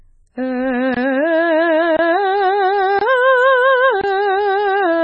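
A very low-bitrate MP3 encode is the likely cause of the heavy MP3 compression damage across the whole of this music clip. The encoder appears to have had only about 16 kbps to work with, so it discarded everything above 7.9 kHz and kept dropping weaker frequency lines from frame to frame. The music sounds dull and muffled, with a watery, swirling texture, metallic chirps on bright sounds, and smeared attacks. The stream was also delivered in one-second chunks with silence inserted at each join, producing a gap between chunks four times: at 0.94–0.97, 1.97–1.99, 2.99–3.01 and 4.01–4.04 s. Each gap lasts about 23 ms, which fits codec padding or a player starting each chunk slightly late. No music is lost, but these short holes break the sound at a steady once-per-second rhythm.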